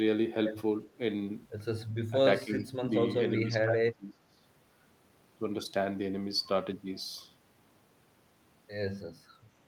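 The speech dips sharply at 2.1 to 2.18 s, again at 2.44 to 2.72 s, then for about a second from 3.31 to 4.41 s. Drops reach around 15 dB, then about 25 dB. This is likely speech suppressed in double talk, an echo canceller ducking the talker during overlap.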